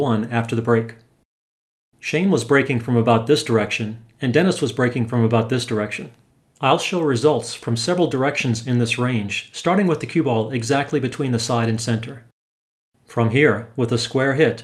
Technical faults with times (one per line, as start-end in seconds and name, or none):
none